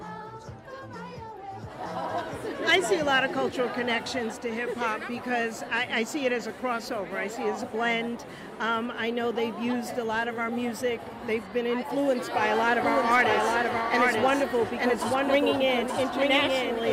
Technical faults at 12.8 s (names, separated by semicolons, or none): doubled audio track